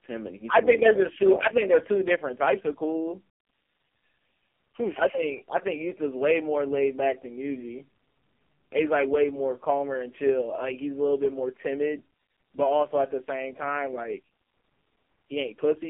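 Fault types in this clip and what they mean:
AMR narrowband mobile codec: speech rebuilt from a vocal-tract model driven by sparse pulses, sounding heavily buzzy and synthetic, which fits the lowest 4.75 kbps mode, inside a 250 Hz to 3.4 kHz band. Unlike telephone filtering alone, the texture is damaged, not just bandwidth.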